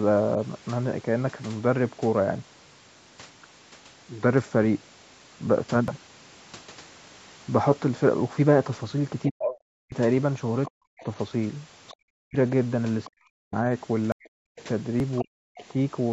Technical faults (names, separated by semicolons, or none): dropped buffer (overrun); speech suppressed in double talk; other side's voice leaking through